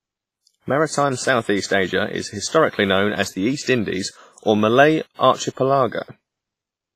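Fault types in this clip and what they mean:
WMA compression, throughout: the speech rings and sounds washy, with a hiss that swells and fades along with the voice, and nothing is present above 15.6 kHz. This heavy damage is likely from Windows Media Audio coding at a low bitrate, roughly what a 24 kbps stream would give. Its long transform blocks smear quantisation noise across tens of milliseconds around each sound, while quieter spectral detail is discarded outright.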